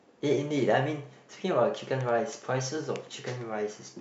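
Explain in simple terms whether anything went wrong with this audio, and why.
Nothing went wrong here.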